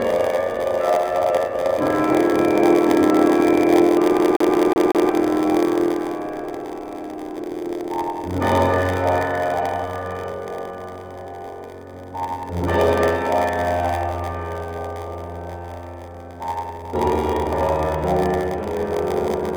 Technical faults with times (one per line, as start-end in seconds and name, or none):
0.00-19.56 block size mismatch (padded)
4.18-5.10 CD stuck on one turn